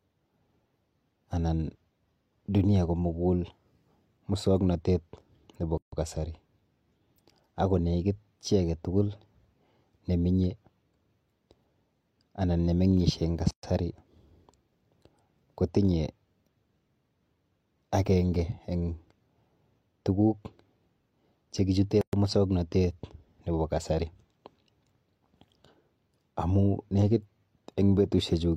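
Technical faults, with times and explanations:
5.78–5.92 s, 13.51–13.63 s, 22.01–22.13 s: gap at a join of encoded pieces. Silences of 148, 125 and 117 ms cut into continuous speech, the first after "musoknotet nepo", the second after "anan nemeng'ishe eng" and the third before "musoknotet nepo kasari". Each has smeared edges, and the speech resumes where it stopped. Separately encoded segments were likely joined untrimmed, leaving encoder start delay and last-frame padding in place.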